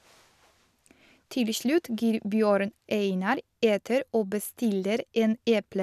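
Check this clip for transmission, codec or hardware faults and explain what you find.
No fault is audible anywhere in this speech recording.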